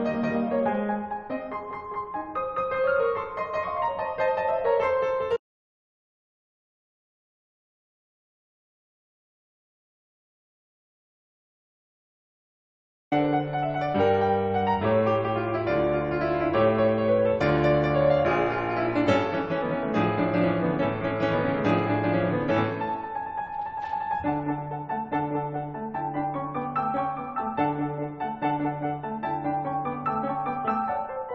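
At 5.37 s the music cuts out abruptly. What follows is an audio dropout to silence lasting until 13.12 s, about 7.75 s in all. The gap is silent, with no hiss or room tone beneath it. The music then resumes mid-flow, as if nothing had paused it. The input was likely lost for that stretch, while recording carried on writing silence. Whatever played during those seconds is gone.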